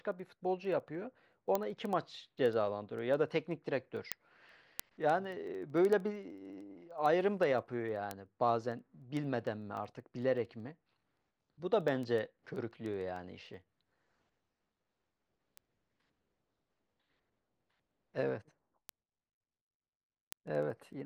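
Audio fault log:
0.12–21.00 s, word clock ticks: steady ticks roughly every 70 ms as the receiver's unlocked clock, around 300 ppm adrift, drops or repeats one sample per slip.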